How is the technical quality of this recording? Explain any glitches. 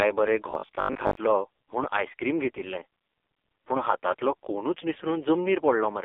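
The recording is poor: the whole clip is heavily degraded by a low-rate mobile codec, and one short stretch near the start turns robotic.

AMR narrowband mobile codec: Throughout the speech, nothing reaches above about 3.6 kHz, and the band sits roughly at 300 Hz to 3.6 kHz. The heavy buzzy, synthetic coloring points to a very low bitrate, around 5 kbps. Unlike simple filtering, it reshapes the voice itself.

Robotic sound from repeated short buffers: From 0.51 to 1.17 s, just before "म्हूण आयस्क्रीम", the speech locks into a rigid metallic buzz at 50 Hz. The likely cause is a 20 ms chunk replayed in place of about half the real audio. That fixed pitch and its brief span separate it from the codec's steady buzz.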